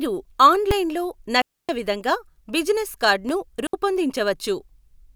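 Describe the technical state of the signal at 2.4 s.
At 2.4 s the speech signal is intact, with no audible fault at that point.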